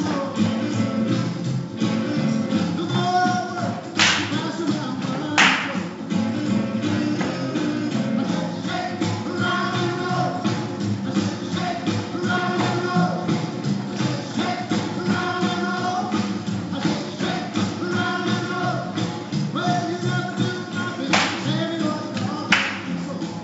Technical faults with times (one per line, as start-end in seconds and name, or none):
none